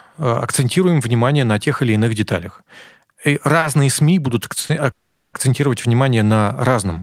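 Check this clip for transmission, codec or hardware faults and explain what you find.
There are two kinds of transmission fault here, both from packets arriving late, and nothing is actually lost in either case.

Short stalls from a late packet show up at 3.59 s, 4.60 s and 4.66 s. Each time a packet missed its slot, the jitter buffer ran dry, and the receiver held the last bit of speech until the packet arrived. The holds are about 30 ms, 40 ms and 30 ms. You hear a syllable drag slightly, with a slight buzz or dip, and then the speech carries on from exactly where it paused.

A call audio freeze runs from 4.91 s to 5.35 s. It sounds like the receiver stretched the last sound briefly, then went silent for about 400 ms, 420 ms in all. The likely cause is packets held up in transit long enough to empty the jitter buffer. Once they arrived, the speech resumed from the same spot, so the effect is an inserted gap rather than a dropout.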